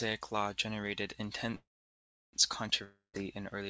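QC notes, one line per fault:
1.55–2.36 s, call audio freeze: Right after "law generated" the last sound carries on as a fading buzz, then about 0.7 s of silence, before the audio resumes exactly where it left off with nothing skipped. The likely cause is packets held up in transit until the jitter buffer ran dry, so the receiver padded the stall and then played the late audio, adding a gap of about 0.78 s and pushing everything after it later.
2.84–3.16 s, long network dropout: The sound smears into a decaying buzz that dies to roughly 0.16 s of silence, and when audio returns about 0.3 s of the material is simply gone, so it jumps forward rather than picking up where it stopped. This likely comes from a stretch of lost packets that never arrived. The receiver concealed the hole for about 0.29 s and then skipped past the missing part, with the fill band-limited below 8 kHz like the rest of the G.722 call audio.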